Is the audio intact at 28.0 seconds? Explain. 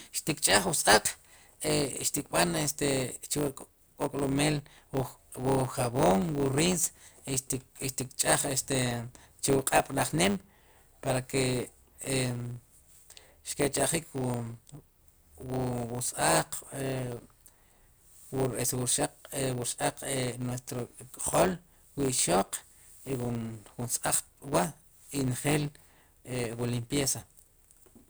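No, at 28.0 s the speech still has the block size mismatch (truncated) running through the whole clip. The tail of each block gets dropped, which fits 512-sample blocks, so there's a 100 Hz buzz and everything runs about 1.07 times fast at roughly normal pitch.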